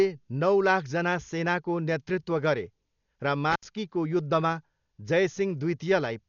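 Throughout the clip, a low-bitrate encode, likely Dolby Digital compression, starves the signal of bits. Nothing survives above about 6.9 kHz, and many frequency lines are refilled with dither noise. The heavy damage points to roughly 48 kbps, leaving the speech dull, rough and fluttering.

From 3.50 to 3.65 s, an intermittent contact, a loose cable or plug, opens the signal path for about 71 ms. The speech cuts out with a crackle at each edge, and faint hiss remains while the line is open.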